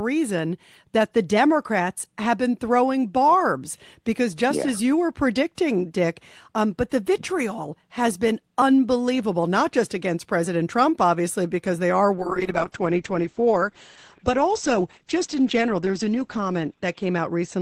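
Speech, with a call bitrate drop starting at 12.17 s and lasting through to the end of the clip. From that point the audio turns coarse and watery, and the top end collapses so the speech sounds muffled, with content above roughly 8 kHz gone. The sound fits the call's bandwidth estimate falling and the Opus encoder being pushed from around 32 kbps down to about 9 kbps. It sits at that floor for the final 4.4 s, with no recovery before the clip ends.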